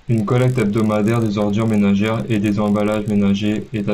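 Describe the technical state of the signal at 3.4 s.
At 3.4 s the speech carries a 50 Hz buzz, a rapid ticking that follows the signal and drops away in gaps. This is a resampler restarted on every block: the 16 kHz to 48 kHz conversion runs separately on each 20 ms block, leaving an error at each edge, throughout the clip.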